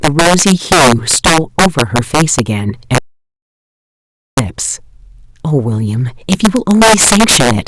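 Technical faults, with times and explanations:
Throughout, integer overflow: harsh cracks on loud speech peaks, sharper than clipping, because about 8 dB of excess gain wraps a small share of samples to the opposite sign.
2.98 to 4.37 s, audio dropout to silence: the speech cuts to total silence without room tone for 1.39 s, likely from a lost input while zeros were written.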